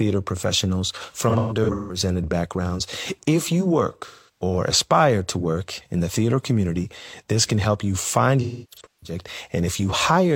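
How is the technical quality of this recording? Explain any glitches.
The recording has three dropouts. AAC frame loss with concealment occurs at 1.29–1.99 s, 4.06–4.43 s and 8.42–9.16 s. The decoder re-synthesises missing frames from the last good spectrum, leaving smeared, phasey patches. The longest gaps, up to roughly 300 ms near 8.4 s, dip towards silence before recovering.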